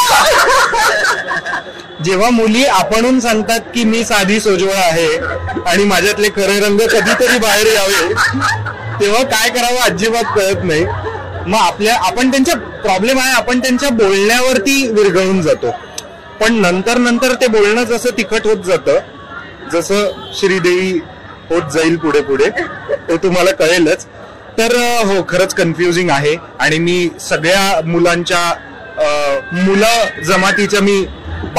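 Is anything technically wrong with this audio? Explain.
No, nothing technically wrong can be heard in this audio.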